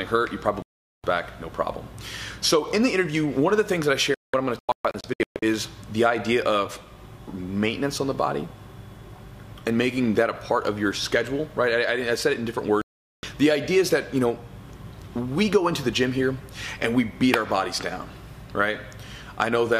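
Digital broadcast dropouts occur at 0.62 to 1.04 s, 4.14 to 5.43 s and 12.82 to 13.24 s. In each, the receiver stopped getting decodable frames and muted until valid ones returned. The first and third are single clean holes of about 0.42 s each. The middle one breaks into several short gaps scattered over 1.28 s, the longest 0.19 s, with roughly 0.7 s missing in total. Whatever was transmitted during those gaps is simply gone.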